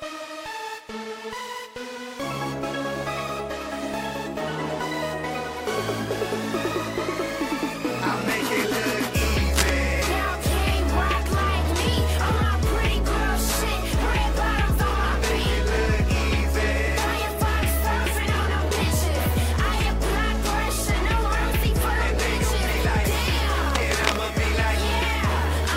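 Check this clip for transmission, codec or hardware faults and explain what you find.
Two bursts of cable scratch noise, from 9.53 to 9.70 s and from 23.70 to 24.16 s. Both are dense, ragged rustling laid over the sound, the first brief and about as loud as the audio itself, the second nearly half a second long and somewhat quieter, roughly 5 dB down. The likely cause is a worn cable, connector or control being moved, so its contact resistance jumps around and injects this irregular noise into the signal path.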